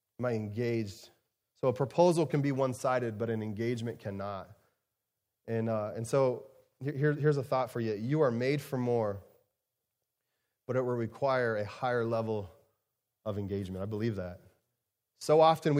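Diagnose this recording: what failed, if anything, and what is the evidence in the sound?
Nothing stood out on listening to this speech recording that would point to a failure at any stage of the chain.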